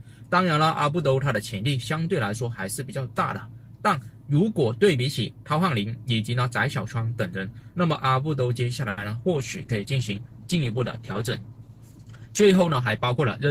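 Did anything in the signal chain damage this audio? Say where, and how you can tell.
Yes. At the network and jitter buffer stage there is a short stall from a late packet, from 8.89 to 9.00 s. A packet arrived late and the buffer ran dry. The receiver stretched the last sound for 80 ms and then resumed. Nothing is lost, but one sound hangs too long.

At the codec stage there is a call bitrate drop from 9.38 s to the end. The bandwidth estimate fell and Opus went from 32 to 13 kbps, staying that low for about 3.5 s. Coarser coding makes the sound rougher and duller, with less top end.

A jitter buffer speed-up follows from 12.79 to 13.17 s. The buffer had built up extra delay. To shed it, the receiver cut short pitch-period pieces, about 50 ms in total. The sound plays at 113% speed with unchanged pitch and feels hurried.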